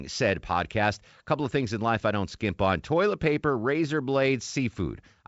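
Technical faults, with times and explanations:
No technical faults can be heard in this speech.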